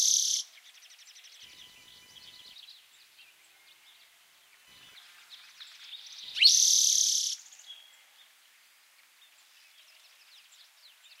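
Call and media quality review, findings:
Computer activity noise, 1.43 to 6.80 s. Processor, graphics or mouse load shifting the ground shared with the audio circuit. Audible as a buzzing chirp pulsing at around 1 kHz, about 40 dB under the everyday sound, tracking machine activity rather than the audio itself.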